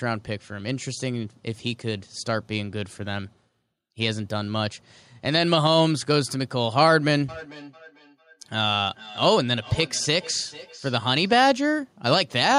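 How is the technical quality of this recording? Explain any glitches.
The recording has one clear fault, a feedback echo between two devices from 7.29 to 11.4 s. A second device in the room replays this speech, the microphone picks it up again, and the local echo canceller cannot remove it. Each word returns roughly every 0.4 s, thinner and ringing, peaking at about 19 dB below the speech.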